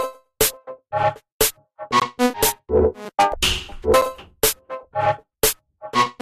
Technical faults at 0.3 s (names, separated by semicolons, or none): none